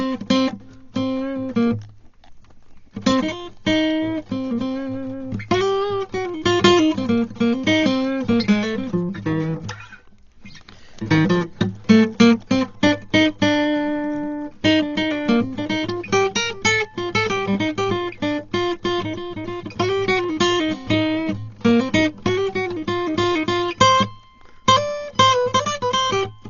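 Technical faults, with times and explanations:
Throughout, Dolby Digital compression: a likely low-bitrate encode near 32 kbps strips detail, leaving dull music, nothing above 7.1 kHz, and rough fluttering noise around tones.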